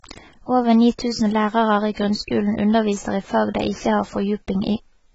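Throughout, the speech sounds dull and smeared, with a fizzy, warbling edge and nothing above 7.8 kHz, likely heavy AAC compression at a low bitrate around 16 kbps.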